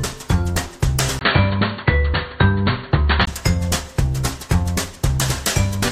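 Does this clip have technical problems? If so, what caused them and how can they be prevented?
Yes. From 1.19 to 3.27 s, the sound turns dull, with nothing above 4.5 kHz and a 20 ms gap at the switch. The likely cause is input switched to a poorer device. Lock the recording input before starting.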